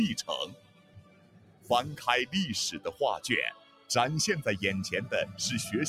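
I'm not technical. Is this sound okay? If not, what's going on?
No. A noise suppressor built for speech was left on across the whole clip. It treats steady tones, room ambience and lingering tails as noise and turns them down, so the sound keeps pumping and thinning while sharp attacks get through.

There are also three passages where the noise suppressor cut the sound hardest: 0.46 to 1.7 s, 2.75 to 3.01 s, and 3.53 to 3.9 s. In each, held or fading sound sinks noticeably and its decay ends early, the first being the longest and deepest.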